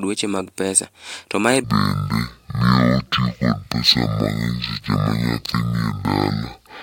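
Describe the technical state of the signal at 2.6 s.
At 2.6 s the speech is dragging at half speed and sits a full octave (12 semitones) low, with a faint mirrored copy of the sound spread across the upper half of the spectrum. This is stereo read as mono, running from 1.64 s, just before "kaluwore kod kaka", to the end of the clip. The interleaved left and right samples are being read in sequence as one channel, doubling the sample count and halving playback speed.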